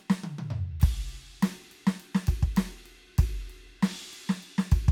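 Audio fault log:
No technical faults are audible in the music; the signal stays continuous and stable throughout.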